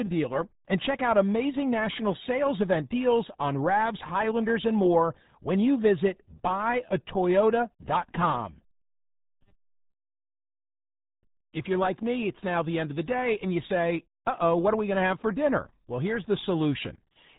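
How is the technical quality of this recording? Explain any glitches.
The technical quality is poor. The whole recording carries the sound of the RealAudio 14.4 codec. From start to finish, nothing above about 3.8 kHz survives. That hard ceiling makes the speech muffled and boxy. The damage is heavy. Vowels turn gargly and consonants smear. The coder keeps only a coarse outline of the voice and rebuilds the rest. The sound fits a very low bitrate, around 8 kbit/s, built for dial-up modems.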